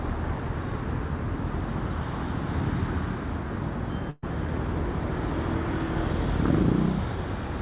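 At 4.1 s, a burst of packet loss drops 120 ms; the receiver fills the gap with a fading copy of the last sound, then skips ahead at 4.24 s.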